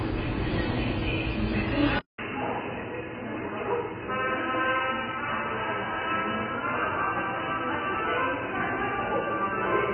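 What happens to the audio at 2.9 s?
At 2.9 s the audio sits inside a stretch that began at 1.99 s and runs to the end of the clip, where the input was likely switched to a poorer device. At the switch there is a gap of about 200 ms, and after it nothing comes through above 3 kHz. The level drops by roughly 10 dB, and a new background noise sits well below the sound, around 35 dB down. The result is a boxy, duller tone with a different character from the opening two seconds.

AAC compression also runs across the whole clip and is present at this moment. The coder quantises each frame's frequency lines coarsely against its hearing model. Here the heavy damage and the hard ceiling at 5 kHz likely point to AAC-LC at about 16 kbps. That explains the smeared, warbling texture on sustained parts of the sound and the fizzy edge on noisy components. After the switch, the narrower 3 kHz band of the new input sets the top end, so the codec's ceiling is no longer what limits it.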